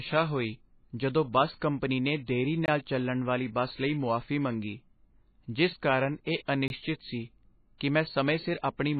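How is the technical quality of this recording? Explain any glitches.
The recording is heavily degraded, with three kinds of fault.

Throughout, the speech sounds dull and watery. Nothing is present above 4.5 kHz, and the upper bands swirl and chirp on sibilants. This is likely MP3 compression at a very low bitrate, somewhere near 19 kbps. Starved of bits, the encoder discards the treble above a fixed cut-off and drops weak spectral lines that then flicker in and out from frame to frame, producing the swirling texture.

Pre-echo occurs at 1.60 s, 6.46–6.48 s and 8.62–8.64 s. Each time, a brief hiss leads a sharp onset by about 16 ms, 24 ms and 22 ms respectively. The transform codec spreads quantisation noise across an entire block, so when a strong attack falls late in that block, noise sized for the loud part leaks into the quiet moment before it. The attack also sounds softened.

A gap between chunks appears at 2.66–2.68 s and again at 6.68–6.70 s. 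Each is a hard-edged hole of about 21 ms, and the two are exactly 4.0 s apart. The audio was delivered in 4-second chunks with silence inserted at each join, probably from codec padding or late chunk starts. Nothing is removed, but the flow breaks abruptly at the seams.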